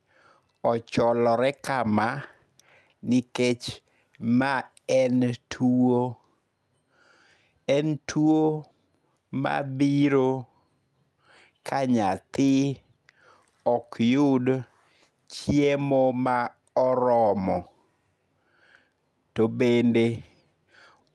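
No faults detected in this speech; the audio carries the normal signature of a WebRTC call path, with the top end stopping at about 12 kHz, consistent with an Opus codec at roughly 48 kbps.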